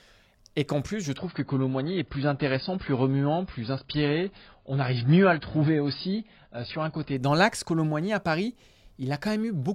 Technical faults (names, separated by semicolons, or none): adaptive stream at a lower bitrate